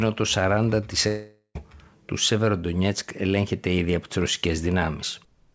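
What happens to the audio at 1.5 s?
At 1.5 s the sound is in a likely long network dropout (1.08–1.57 s): the last sound smears into a fading buzz, goes briefly silent, then resumes with 0.48 s lost. A short packet-loss glitch would not run this long.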